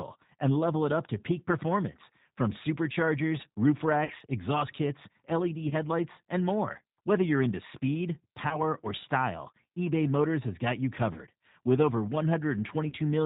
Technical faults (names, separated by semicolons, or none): G.729 codec; VoIP packet loss concealed by the speech codec